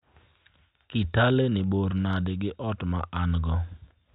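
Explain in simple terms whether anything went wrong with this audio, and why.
Nothing went wrong; this speech recording has no audible faults.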